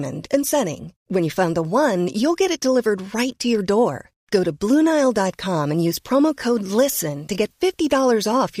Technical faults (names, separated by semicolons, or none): low bit depth with dither